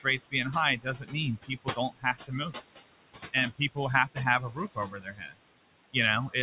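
Noise suppressor artifacts run through the whole clip: the suppressor pulls the room noise down by about 19 dB between phrases and lets it back under the speech. Speech is cut by the noise suppressor from 0.77 to 1.15 s, 1.42 to 2.55 s and 4.51 to 5.36 s. Quiet speech is mistaken for noise and dropped by up to about 21 dB, so a few hundred milliseconds in each span sound swallowed or faint. The call path's band limit, with nothing above 4 kHz, fits 64 kbps G.711 A-law.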